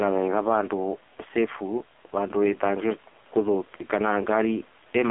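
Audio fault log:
throughout, gain pumping: the quiet room noise sits about 40 dB under the speech, and the gain swings about 5 dB, squashing loud and soft parts closer in level, likely from a fast limiter fighting excessive input gain.
throughout, AMR narrowband mobile codec: the speech is confined to roughly 300 Hz to 3.5 kHz with nothing above 3.6 kHz, and its heavy buzzy, synthetic texture fits AMR-NB at a low rate near 5.9 kbps.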